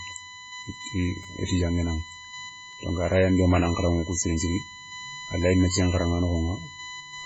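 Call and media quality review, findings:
USB whine, throughout. Fixed tone at 1 kHz, strongest at its 2 kHz harmonic, about 15 dB below the speech. Probable component: USB audio interface power or ground. Bus draws current in 1 ms frames; that current leaks into the analogue path as steady pitch.

MP3 compression, throughout. Watery, swirly speech, smeared onsets, nothing above 7.7 kHz. Heavy damage, pointing to a very low bitrate. Likely cause: MP3 encoder starving for bits, cutting treble, toggling weak bands frame to frame.

Repeated buffer, 1.23 s. Brief click or buzz, not a stutter. Same 5 ms slice replayed several times, hard join each pass, fits a 5 ms playback buffer. About 15 ms of audio lost. Probable component: playback driver underrun.

Repeated buffer, 2.71 to 2.73 s, just before "donc aray an". Same mechanism, slightly longer glitch. Late data, last 5 ms buffer looped. About 20 ms lost.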